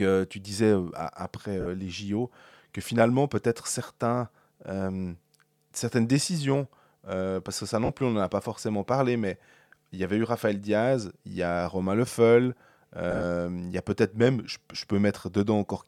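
Lost LE Audio frames at 1.61 s (50 ms), 7.85 s (40 ms) and 13.11 to 13.24 s: the LC3 decoder repeats the last spectrum with random signs, smearing speech into brief noisy hiss.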